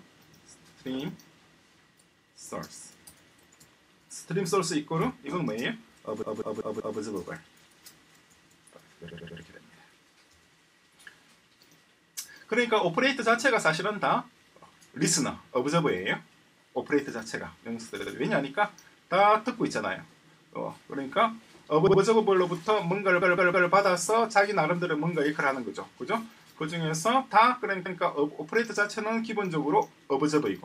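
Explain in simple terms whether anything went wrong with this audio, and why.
Repeated frames make the sound stutter at 6.22, 9.10, 18.00, 21.87, 23.22 and 27.86 s. Short chunks, 64 to 192 ms long, were stored more than once, so each replays, making the audio longer.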